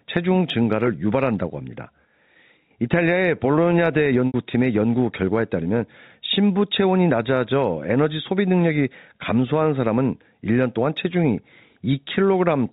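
At about 4.27 s there's a packet loss with pitch repetition, running to 4.34 s. Roughly 70 ms of speech went missing, and the receiver looped the last pitch period to cover it, so you hear a brief held buzz that fades toward silence before the speech cross-fades back in.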